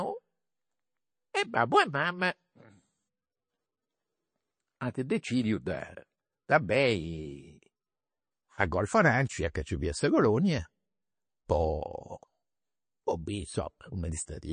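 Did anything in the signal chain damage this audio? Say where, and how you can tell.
Yes, at the codec stage: the speech sounds watery throughout with nothing above 9.4 kHz, likely MP3 compression starved of bits, which fits a rate near 30 kbps.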